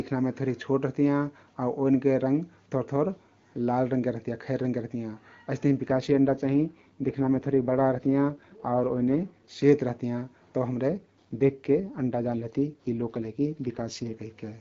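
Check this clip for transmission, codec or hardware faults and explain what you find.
There are two faults in this speech, both an AMR rate drop. From 5.87 to 9.64 s and again from 10.90 to 14.14 s the speech turns rougher and more synthetic, with no gap and no narrowing of the band, then clears again. The network moved the AMR wideband codec to a lower rate to protect the bits on a weak link, which fits a drop from 23.85 to 8.85 kbit/s. Between and around these spans the HD Voice coding sounds clean.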